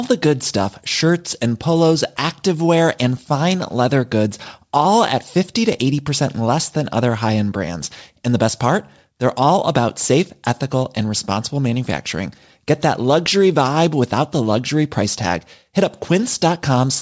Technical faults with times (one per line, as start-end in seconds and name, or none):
none